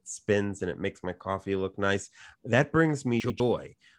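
A speech clip with chunks out of order near the end, from 3.2 to 3.4 s: a 100 ms chunk turns up one chunk late, playing after the one that should follow it. Nothing's missing, but that stretch comes out jumbled, with three hard joins.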